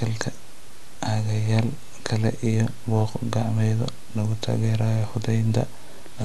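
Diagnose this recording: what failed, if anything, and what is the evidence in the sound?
The fault is at the codec stage. Throughout the speech, nothing sounds above 12.2 kHz. A plainly audible gurgling, granular distortion rides on everything. This is likely MP2 compression at a rate that fits about 80 kbps. Upper sub-bands are switched off, and the remaining bands are coarsely quantised.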